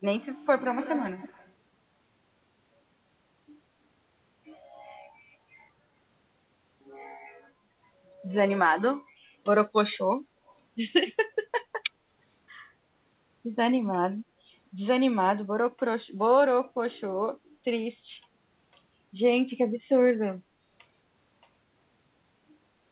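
From 0.81 to 1.52 s an echo leak returns a copy of the speech about 207 ms late and roughly 15 dB down, likely from a loudspeaker whose echo canceller let it through. It shows as a faint duplicate trailing the waveform. From 9.60 to 12.14 s pre-emphasis is left on: an FM 75 µs treble boost without its matching cut, about 14 dB at 10 kHz. The speech sounds thin and hissy, and the spectrogram brightens toward its 4 kHz G.711 ceiling. Inside that stretch, at 9.93 to 9.98 s and 10.47 to 10.55 s, brief echo-leak scraps return at the same 207 ms delay, much quieter, barely visible smudges.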